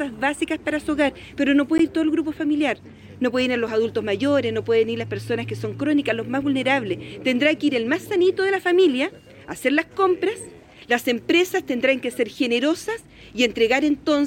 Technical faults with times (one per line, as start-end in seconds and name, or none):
1.78 block of digital silence
3.67 block of digital silence